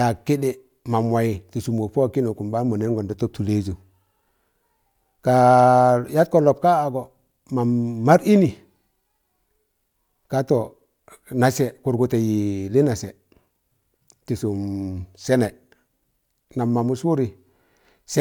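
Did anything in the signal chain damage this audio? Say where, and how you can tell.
No, nothing in the signal chain damaged this audio.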